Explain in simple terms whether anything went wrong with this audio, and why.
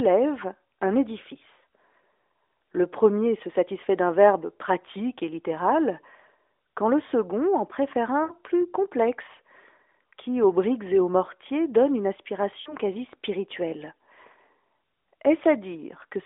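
Yes, twice the speech briefly smears and fades. At 8.24 to 8.33 s, right after "le second en préfère", the sound drags out and thins before "plus complexe" returns a little rough. At 12.62 to 12.76 s, after "aux mortiers donne une", there is a shorter dip before "quasi spirituelle". These are lost AMR speech frames. Radio errors spoiled a few tiny slices of the phone signal, so the phone's decoder stretched the last good sound while fading it out.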